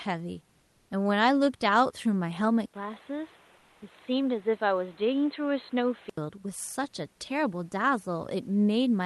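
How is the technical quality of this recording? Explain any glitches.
The recording has two audible faults, both in its middle section. Around them the sound carries the mild coding texture and the roughly 12 kHz top end of a call codec, which fits Opus at a moderate bitrate.

From 2.66 to 6.18 s the input has switched to a poorer device. The sound goes dull and boxy, with nothing above 4.2 kHz, a slightly lower level, and a new, noisier floor. There is an 80 ms silence at the change. The likely cause is the system moving its input to a different microphone or a headset's call profile, which passes a narrower band and has its own tone and noise. The full bandwidth returns at 6.18 s.

From 3.57 to 3.81 s, inside that stretch, there is comfort noise in place of the background. For 240 ms the real background, which sits about 36 dB below the loudest parts, is replaced by a smooth, featureless hiss about 1 dB quieter. 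This is likely discontinuous transmission, which points to Opus DTX: the sender paused transmission during a gap, and the receiver filled it with synthetic noise roughly matched to the background.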